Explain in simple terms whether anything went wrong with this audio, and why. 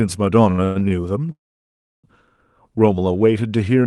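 Between 0.51 and 0.93 s the speech stutters and drags, catching four times, the longest hold lasting about a tenth of a second. These are repeated stalls (stutter): the call's audio packets kept arriving late, so the receiver ran out and stretched the last sound to fill about half that stretch, while nothing was actually lost.

From 1.32 to 2.06 s the speech stops dead for about three quarters of a second, mostly near-silent, then picks up exactly where it left off. This is a call audio freeze, likely caused by packets being held up on the way, leaving the receiver nothing to play until they arrived.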